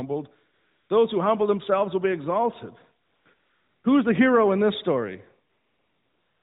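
A smooth, even hiss replaces the real background at 0.54–0.90 s, just before "those who humble themselves"; at 3.06–3.26 s, after "themselves will be exalted"; at 3.34–3.84 s; and from 5.50 s to the end, after "hero in this story". This is AMR comfort noise. The phone judged the talker silent and stopped sending speech frames, so the receiver filled each gap with synthetic noise built from a rough level-and-spectrum description.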